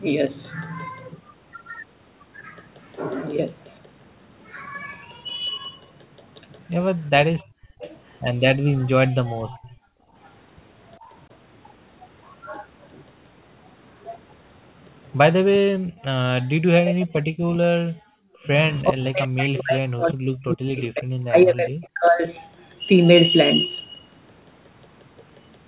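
From 7.37 to 7.92 s there's a faint delayed copy of the speech, roughly 30 dB down and trailing by about 402 ms. That's an echo leak, likely an echo canceller letting loudspeaker pickup through. It returns louder, around 25 dB down, from 9.49 to 9.68 s.

The room background gated by the echo canceller shows up in the same stretch: the background ducks hard, by about 39 to 40 dB, from 7.45 to 7.81 s and from 8.81 to 10.14 s. It dips again at 15.72 to 16.04 s. A lighter dip of about 11 dB at 10.99 to 11.1 s is the same gating. It's the canceller clamping the mic while the loudspeaker plays.

Then from 16.4 to 22.26 s the talker keeps sinking and chopping out, at worst by around 40 dB, for roughly five seconds all told. That's speech suppressed in double talk, likely because the canceller couldn't tell the talker from the echo and turned everything down. All of it sits within the G.711 band, with nothing above 4 kHz.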